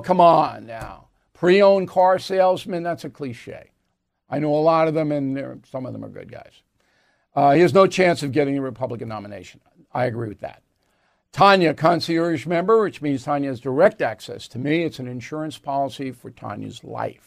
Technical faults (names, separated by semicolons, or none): none